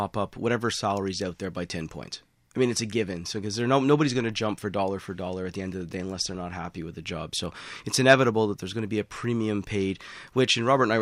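The speech recording has no technical faults to report.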